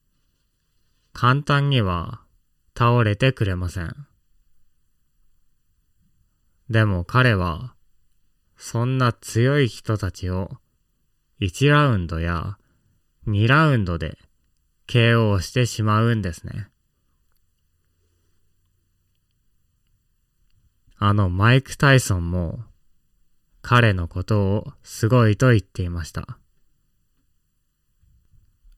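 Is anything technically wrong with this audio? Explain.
Yes. Channel delay causes comb filtering throughout this speech. One channel lags by under a millisecond, so summing cancels evenly spaced frequencies from around 700 Hz, sounding hollow and phasey.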